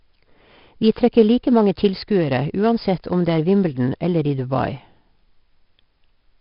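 All the way through, the speech carries heavy 4-bit ADPCM compression: each sample is coded as a coarse step from a prediction, so a gritty hiss rides on every loud syllable and sharp onsets crunch. Nothing sits above 5.3 kHz, which points to roughly 44 kbps.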